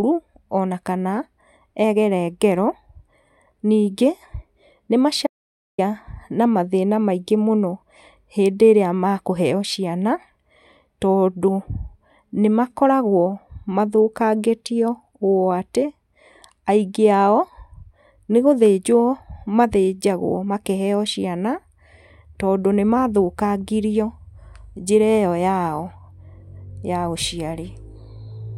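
Audio dropout to silence hits this speech recording from 5.27 to 5.78 s: for about 0.52 s the sound cuts to silence, with no room tone, then resumes mid-flow. The input was likely lost briefly while the recorder kept writing silence.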